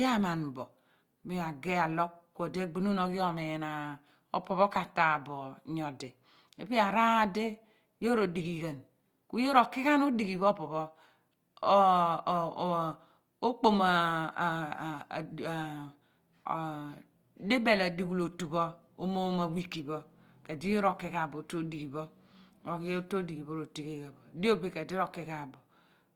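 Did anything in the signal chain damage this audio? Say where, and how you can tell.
Yes, at the codec stage, throughout the speech. Tones and vowels come out rough and grainy, with a noisy texture rather than swirling. That fits Opus compression, likely in its CELT music mode at a low rate around 24 kbps. Band energies are kept, but the fine detail inside each band is filled by folding or noise. On a spectrogram the band stays full up to about 20.2 kHz with few holes, while harmonics look smeared and speckled.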